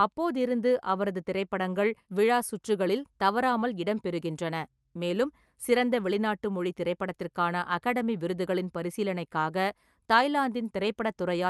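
No technical faults can be heard in this speech; it has passed through a call codec in the ordinary way, with its normal coding character and content reaching up to about 12 kHz, which fits an Opus stream at a moderate bitrate of around 48 kbps.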